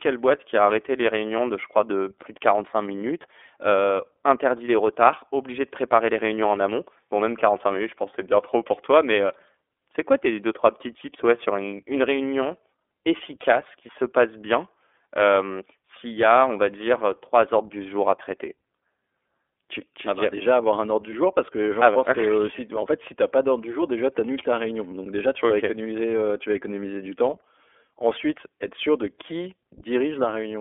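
Throughout the recording the speech has passed through the iLBC codec, which codes each 30 ms frame on its own, without drawing on the frame before. The roughness fits the 13.33 kbps mode. The signal is squeezed into a telephone band of roughly 300 Hz to 3.5 kHz, with nothing above 3.7 kHz, so the voice sounds thin and muffled. The coding damage is plainly audible as a rough, slightly synthetic grain on every phrase.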